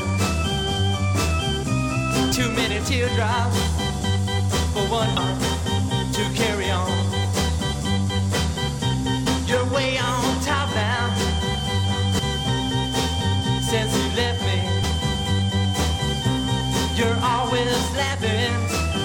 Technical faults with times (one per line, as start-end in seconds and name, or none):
2.31 damaged data in a compressed stream
5.17 damaged data in a compressed stream
9.25 damaged data in a compressed stream
12.18 damaged data in a compressed stream
14.83 damaged data in a compressed stream